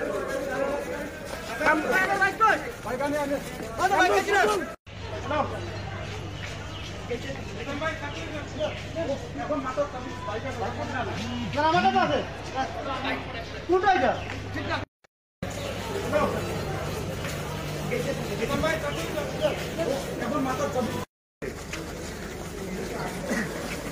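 No technical faults can be heard anywhere in the recording. Nothing in it points to a problem in the chain that carried the sound.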